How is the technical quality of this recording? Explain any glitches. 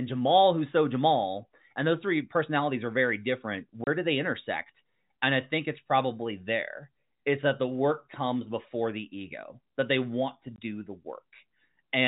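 Two brief dropouts interrupt the speech, which is carried in the telephone band with nothing above 4 kHz.

Packet loss filled with silence occurs at 3.84–3.87 s, between "personalities are very different" and "do they intersect", and again at 10.56–10.58 s, after "that they want to". Packets went missing and the receiver played silence in their place, leaving a 30 ms hole and then a 20 ms hole. Those lengths fit three and then two 10 ms packets. Each gap has hard edges.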